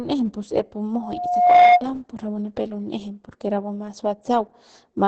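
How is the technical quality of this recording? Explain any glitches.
Quality's fairly rough, with two problems: low-bitrate codec damage across the whole clip and a short feedback howl near the start.

Opus voice compression runs throughout. The speech is band-limited with nothing above about 8.8 kHz, and it sounds muffled, hoarse and a little robotic. That's SILK's linear-prediction coder spending very few bits on the excitation, which fits a rate around 10 kbps.

Loudspeaker feedback squeal hits from 1.01 to 1.82 s. A mic is hearing its own loudspeaker, and at 715 Hz the loop gain tops one, so that tone feeds itself. It swells over roughly half a second into a whistle sitting well above the speech.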